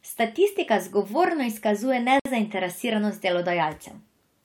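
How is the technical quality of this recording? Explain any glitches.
The recording has one glitch, a gap at a join of encoded pieces. From 2.20 to 2.25 s, the speech stops for about 59 ms. Separately encoded segments were joined untrimmed, leaving encoder start delay and end padding as silence. Unlike a dropout, nothing is lost: the speech resumes exactly where it stopped, with smeared edges.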